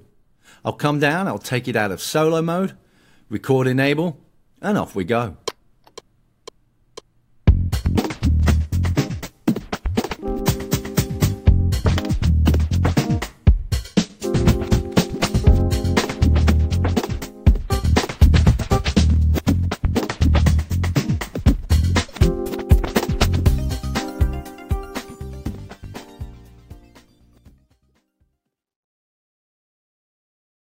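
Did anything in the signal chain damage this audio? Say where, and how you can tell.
No, nothing along the signal chain has audibly damaged this audio. No stage, from capture through to playback, leaves a mark on the sound at any point in the clip.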